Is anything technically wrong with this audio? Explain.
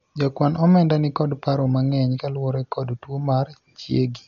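Yes. Throughout the speech, the sound is heavily damaged by what is likely Dolby Digital compression. The band stops at 7 kHz, and coarsely coded frequency lines leave a dull, rough, fluttering hiss, which fits a bitrate around 48 kbps.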